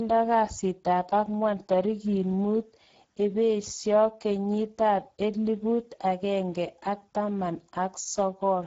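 Speex codec damage runs through the whole speech clip and is plainly audible. The voice sounds hoarse and noisy because too few bits, consistent with a rate near 10 kbps, describe the excitation signal. Nothing is present above 7.6 kHz.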